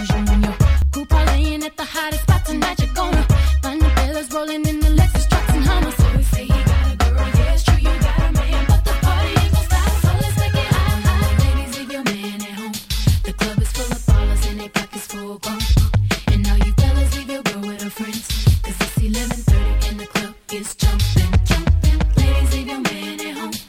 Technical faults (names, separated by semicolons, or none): dropped buffer (overrun)